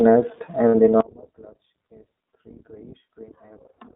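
Speech that has been through the iLBC codec for its whole length, band-limited to roughly 200 Hz to 3.7 kHz, with a rough, slightly synthetic edge that fits the 15.2 kbps, 20 ms-frame mode rather than plain filtering. From 0.69 to 0.75 s, about 60 ms of lost iLBC frames is filled by a held, faintly buzzy repeat of the last pitch cycle. It is concealment, not silence or a click, and the sound recovers at once because each frame decodes independently. From 1.01 s to the end, the level collapses by about 34 dB, leaving only a faint remnant. That fits one channel inverted: the shared centre content cancels in the mono sum. This differs from a fade or dropout because a faint residue of the channel difference stays audible.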